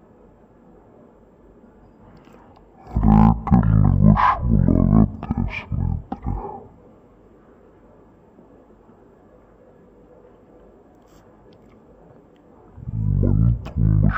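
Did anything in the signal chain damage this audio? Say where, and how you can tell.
Yes: stereo read as mono at the sample-format stage. Throughout, the audio runs at half speed and an octave low, because interleaved left-right sample pairs are played sequentially as one channel.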